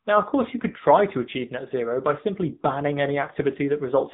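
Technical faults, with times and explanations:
Throughout: AMR narrowband mobile codec. The speech sounds plainly buzzy and synthetic, with nothing above 3.8 kHz. The 8 kHz-sampled signal is rebuilt from a vocal-tract model fed sparse pulses every 5 ms, and this much damage fits a low mode near 8 kbps.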